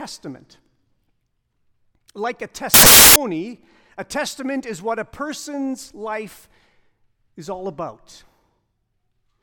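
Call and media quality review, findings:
Samples built from the wrong bytes, 2.74–3.16 s (about 0.42 s): speech replaced by loud, harsh broadband noise. Probable component: sample decoder/reader. Mechanism: byte offset, swapped byte order or misalignment promotes fast-changing low bits to the high part of each value.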